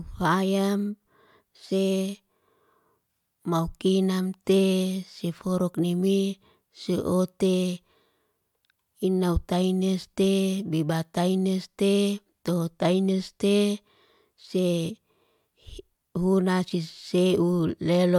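No technical faults can be heard anywhere in this speech recording. Nothing in its timeline calls for a timestamp or a description of a problem.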